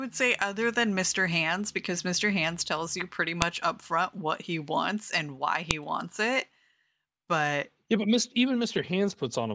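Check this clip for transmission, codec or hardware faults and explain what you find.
Two brief faults appear in this speech clip, both of the same kind: a file header played as audio, at 3.42 s and 5.71 s. Each marks a point where a separate WAV segment was appended without its header being stripped, so the header bytes were decoded as sample values. The result is a sharp, loud click lasting only a millisecond or two, unrelated to the speech level at that moment, landing at the start of each new segment.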